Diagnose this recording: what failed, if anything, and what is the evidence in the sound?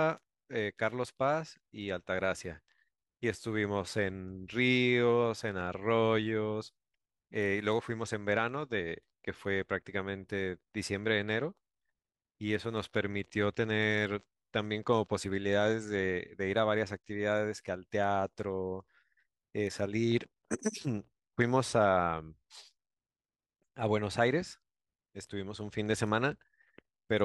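From 19.89 s to the end of the clip, the speech picks up a gritty, inharmonic fizz that rises with louder and brighter passages. This points to crude rate conversion at the sample-format conversion stage. The resampling interpolates linearly between neighbouring samples with no anti-aliasing filter, and the fizz fits a 48 kHz to 44.1 kHz conversion. The error repeats in a cycle set by the two rates and sits roughly 40 dB below the speech, producing shifted, inharmonic copies of it.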